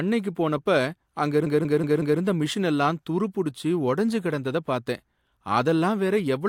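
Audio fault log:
1.47–2.21 s, repeated frames: The same block of about 186 ms plays five times in a row, four of them extra, as a stutter. The decoder was handed one short run of compressed frames again and again. This adds 743 ms to the clip.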